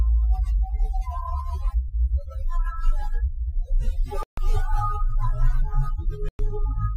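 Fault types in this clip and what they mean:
Bluetooth stall: the sound twice drops to silence, for 0.14 s and 0.11 s, then carries on; likely the headphone buffer ran dry while packets were resent.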